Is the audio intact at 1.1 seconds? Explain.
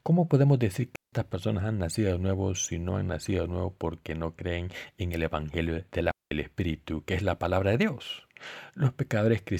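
No. At 1.1 seconds the speech sits inside a digital wireless dropout that runs from 0.96 to 1.13 s. The radio link lost too much data to rebuild the signal. So the receiver muted its output for about 169 ms, using a very short fade in and out. What you hear is a clean hole of near silence. No crackle or noise burst comes before or after it.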